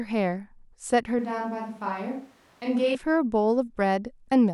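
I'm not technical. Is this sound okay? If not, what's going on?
No. From about 1.19 to 2.95 seconds, the speech suddenly turns hollow and roomy. It drops a bit in volume, and more room noise creeps in. That points to a switch to a distant microphone, likely because the close one dropped out. Then it snaps back.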